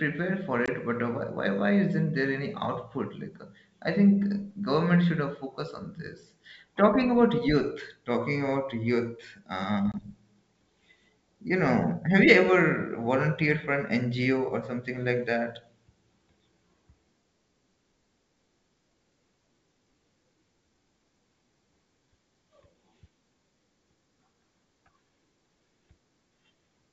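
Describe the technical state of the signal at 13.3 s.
At 13.3 s the signal is intact, with the speech carried cleanly through G.722 wideband telephone coding at 64 kbit/s and no fault present at that moment.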